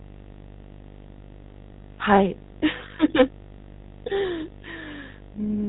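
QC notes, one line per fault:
throughout: video or display buzz. A steady 50 Hz buzz sits under the speech with a layer of hash above it, roughly 15 dB below the talker, and there's a very high line-rate tone at 15.6 kHz. That pairing is the signature of a screen or video cable leaking into the audio path: the buzz follows the picture's 50 Hz field rate, and the whine follows the scan line rate.
throughout: GSM full-rate codec. The speech has that buzzy, gravelly texture of the original GSM coder, and the damage is plainly audible. Nothing gets through above 3.9 kHz, so the top of the speech band is simply gone. The roughness comes from the codec's approach: it models the vocal tract and drives it with regularly spaced pulses, keeping only every third excitation sample. The sound fits the 13 kbit/s GSM full-rate coder.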